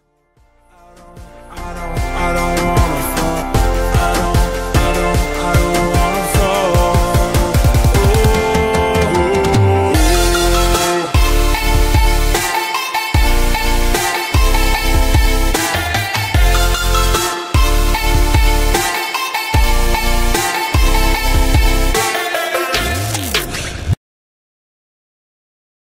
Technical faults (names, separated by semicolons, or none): none